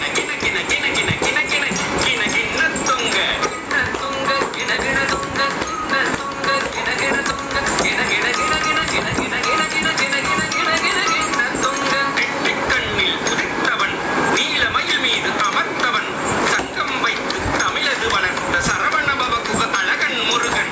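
Throughout the clip there is gain pumping: the level ducks by around 10 dB under each loud sound, leaving the level squashed. The likely cause is gain set far too high, with a fast limiter clamping it. On the waveform, loud and soft parts sit closer in level than they should; a spectrogram shows everything cut off above 8 kHz by the call processing.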